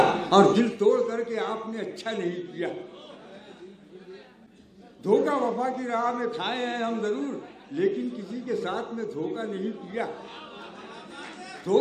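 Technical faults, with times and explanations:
0.51 to 0.94 s, zipper noise: the level drops by around 15 dB here, but in a couple of hundred small unsmoothed steps a second rather than a clean glide, so each jump leaves a tiny click and together they ride on the sound as a brief buzzy zip.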